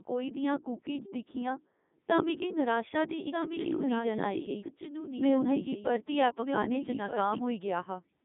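From the start, the speech has passed through the Codec 2 vocoder at 3.2 kbit/s, which transmits only pitch, voicing, energy and a spectral envelope, then rebuilds the voice from sine waves. The original waveform is therefore discarded, and the damage here is heavy: the voice sounds robotic and buzzy throughout. The line band spans 200 Hz to 3.7 kHz, and nothing is present above 3.8 kHz.

At 3.32 s, just after "तां मिगी निराशा दी", a doubled audio track begins. A second full-band copy of the same speech runs about one and a half seconds behind, roughly 5 dB quieter, with no decay or room colouring. It cuts in abruptly and drops out just as abruptly at 7.38 s. The likely cause is the audio being captured a second time through a slower path.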